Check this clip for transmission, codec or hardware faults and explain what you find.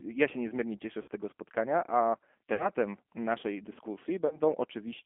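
The speech carries two faults: G.729 coding throughout, and three packet-loss gaps concealed by the speech codec.

G.729 codec, whole clip: the speech is rebuilt from a vocal-tract filter, a pitch predictor and a few pulses per frame. Its rough, slightly synthetic texture is plainly audible and fits an 8 kbit/s stream. The narrow 250 Hz to 3.4 kHz band alone would only muffle the sound, not add this texture.

VoIP packet loss concealed by the speech codec, at 1.02 to 1.08 s, 2.54 to 2.69 s and 4.27 to 4.40 s: the decoder filled the missing audio by extending its last pitch and filter at falling gain. The first two gaps are each about 60 ms, consistent with two lost packets, and the third is about 30 ms. Each sounds like a stretched smear that fades and stays weak briefly afterward, not a clean dropout or click.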